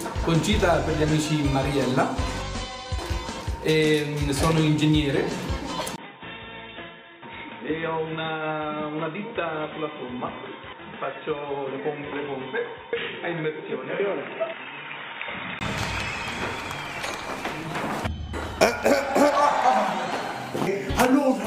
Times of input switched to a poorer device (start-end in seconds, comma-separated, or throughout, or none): 5.96-15.61